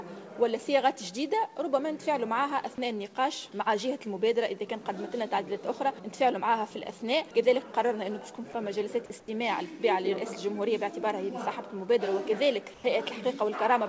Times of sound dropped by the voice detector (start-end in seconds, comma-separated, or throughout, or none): 8.52-8.54